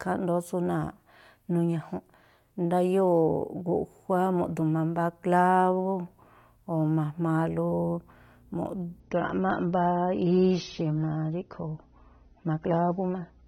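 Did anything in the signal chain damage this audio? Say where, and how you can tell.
Yes: the adaptive stream dropped to a lower bitrate from 9.00 s to the end of the clip. This is a network-stage fault surfacing through the codec. With no gap, the speech suddenly loses its top end, with nothing above 6.3 kHz, and coding artefacts thicken. A slowed connection pushed the player onto a leaner version of the same AAC stream, and the sound fits a step from around 96 down to around 24 kbit/s.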